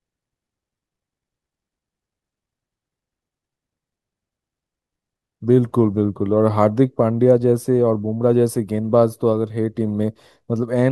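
No technical faults are audible.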